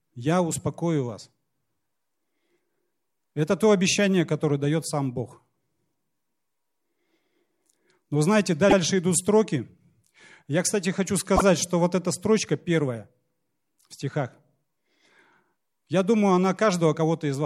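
At 8.69 s, just before "идут строки", about 78 ms of speech plays twice, which fits three repeated frames. At 11.35 s, after "кстати хочу", a 26 ms block repeats. Both are repeated frames. Each stutters and lengthens the clip.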